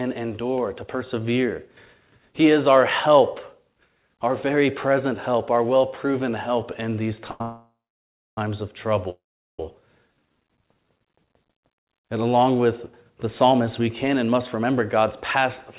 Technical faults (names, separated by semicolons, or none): short stall from a late packet; call audio freeze; jitter buffer slow-down; jitter buffer speed-up